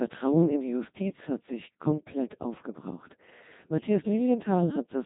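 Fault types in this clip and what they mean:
Codec 2 vocoder: The speech is rebuilt from pitch and envelope data, likely at 2.4 kbit/s, sounding robotic and buzzy, with nothing above 3.8 kHz.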